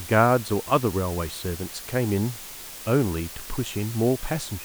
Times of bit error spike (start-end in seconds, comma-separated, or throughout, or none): none